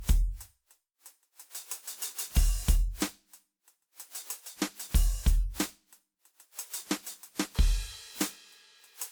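From the start to the end, the music carries generation loss. It sounds swirly and hollow, more smeared than a single lossy pass would leave it. Attacks blur and lose their edge. The likely cause is repeated lossy coding, roughly seven decode and re-encode passes, with a character that fits WMA at 128 kbit/s. Each pass quantises again on a shifted frame grid. The noise and spectral gaps stack up. Content still reaches about 20.1 kHz.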